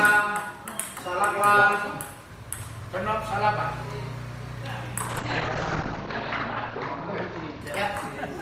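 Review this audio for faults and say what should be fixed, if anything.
From 5.05 s to 7.92 s the audio turns rougher and more muffled, and it is at its worst for about 1.3 s within that stretch. This is a call bitrate drop. The bandwidth estimate fell and the encoder was told to spend far fewer bits, which fits a fall from roughly 32 kbps to about 11 kbps. At that rate Opus codes more coarsely and narrows its audio band from 20 kHz to 8 kHz, so the top end disappears until the bitrate recovers. To prevent it, give the call a steadier network path and let the bandwidth estimator recover more quickly.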